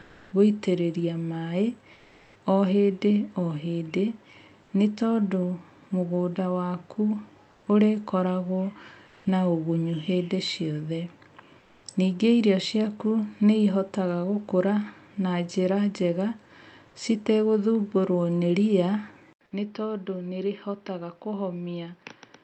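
A speech recording with comfort noise in place of the background in five pauses: 0.01–0.31 s, 1.93–2.35 s, 7.51–7.63 s, 9.07–9.25 s and 11.59–11.83 s. Each gap's textured room sound gives way to smooth, even noise, shifted by about 2 to 4 dB. On a spectrogram these appear as flat, featureless patches, the likely result of Opus discontinuous transmission. At 19.33 s the input switched to a poorer device, probably a different microphone or headset profile. An 80 ms silent gap marks the switch. After it the level falls by around 10 dB, the sound turns dull, and a spectrogram shows nothing above 5.9 kHz through to the end, with a new noise floor roughly 40 dB under the speech. Before the switch, the call path's own top limit near 8 kHz applies.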